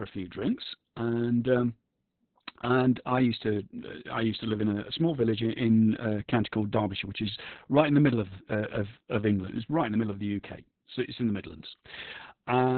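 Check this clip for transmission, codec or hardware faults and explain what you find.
One codec fault runs through the whole recording: Opus voice compression at a very low rate. The speech is band-limited and heavily coded from start to finish. On a spectrogram, energy stops flat at about 4.3 kHz, leaving an empty band above it. Opus has fallen back to narrowband SILK, which predicts the vocal tract and codes the excitation coarsely. The result is muffled, hoarse, slightly robotic speech, a degree of damage that points to a bitrate around 6 kbps with long frames.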